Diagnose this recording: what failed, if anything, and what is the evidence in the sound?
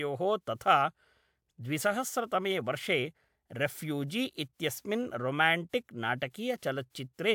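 No fault detected anywhere.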